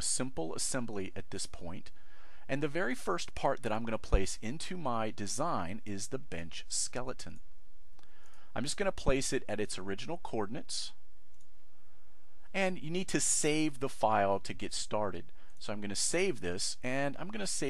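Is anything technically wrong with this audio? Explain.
No, nothing is technically wrong with this audio.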